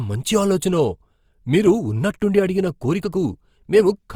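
Speech with plainly audible Opus compression throughout: fine detail turns rough and grainy where missing band detail is filled with noise, likely from low-bitrate CELT coding consistent with around 24 kbps. The bandwidth still reaches about 20.2 kHz.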